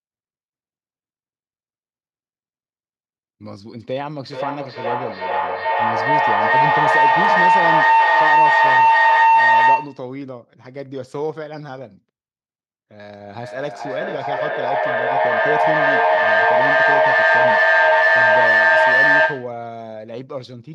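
From 4.23 to 10.15 s there's a proper feedback howl. Two devices sharing a room are both on the call, and the loop from one's loudspeaker into the other's microphone and back is gaining level on each pass. So instead of dying away, it narrows onto a tone somewhere around 1 kHz, pulsing roughly every 0.4 s at the loop's delay, and climbs to about 14 dB above the speech before it finally cuts off.

Later, from 13.43 to 19.65 s, you get feedback echo between two devices. One device is replaying what the other's mic sent, that mic picks it straight back up, and neither echo canceller touches it because each only removes its own playback. The speech keeps coming round again at a steady interval of roughly 0.4 s, thinner and more ringing each lap, and the repeats stack up to about 12 dB over the speech rather than fading.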